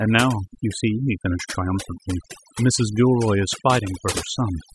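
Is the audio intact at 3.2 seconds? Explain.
No. At 3.2 seconds the speech is affected by overdone noise removal, which runs through the whole clip. Frequency bands judged close to the noise floor are pushed far down or cut, taking quieter speech detail with them, so the background drops and breaks up into twinkling specks.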